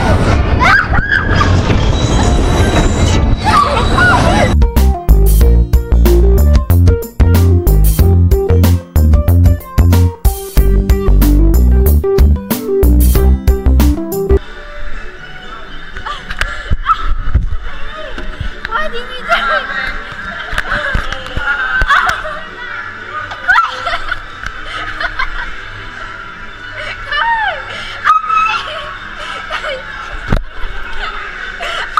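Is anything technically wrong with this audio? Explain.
Yes. Hard clipping runs through the whole clip. A stage was driven about 7 dB beyond what it could pass, so the loudest peaks, roughly one to two percent of the samples, were sliced flat. Those flattened tops add high harmonics, heard as crackle on the louder moments.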